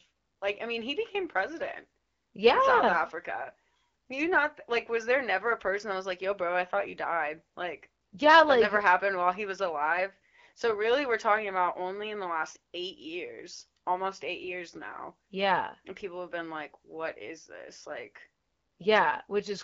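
No technical faults can be heard anywhere in the speech. It carries the sound of AMR wideband (HD Voice) coding at what fits 12.65 kbit/s, with speech clear up to about 6.4 kHz and only light codec colouring.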